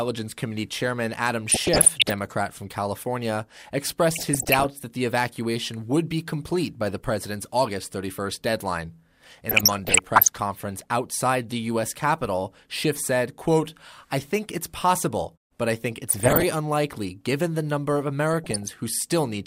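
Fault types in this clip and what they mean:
DAB burbling: heard at 1.49–2.12 s, 4.16–4.66 s (ending just before "that the evacuation would"), 9.49–10.38 s, 16.09–16.43 s and 18.34–18.68 s. Weak reception lets a small share of bit errors, well under one percent, slip past error correction into the MP2 audio data. The resulting wrong samples put short blips of noise in single sub-bands, and wrong scale factors make sub-bands jump in level for up to a frame, laying blips and level jumps over the speech.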